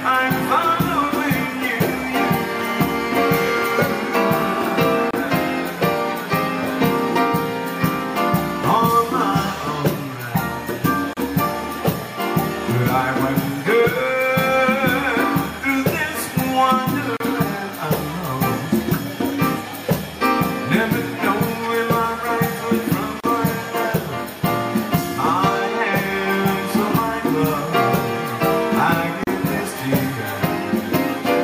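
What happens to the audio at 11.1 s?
At 11.1 s the audio hits a gap at a join of encoded pieces. Separately encoded segments were spliced together without trimming, so the encoder's start-up delay and the padding on the previous segment's final frame both stay in. From 11.13 to 11.17 s, about 34 ms, the continuous sound drops to silence, with its edges smeared by the codec, then resumes exactly where it stopped. This join recurs at a 6-second spacing.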